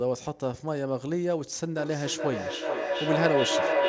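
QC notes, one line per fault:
1.77 s to end, feedback howl: a nearby device on the same call feeds loudspeaker output back into the microphone with gain above unity, so each pass grows. It narrows to a tone around 500 Hz, repeating roughly every 400 ms, peaking about 3 dB above the speech.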